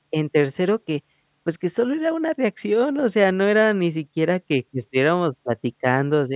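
No technical faults can be heard in this speech recording. Nothing in the sound points to a problem with how it was captured or carried.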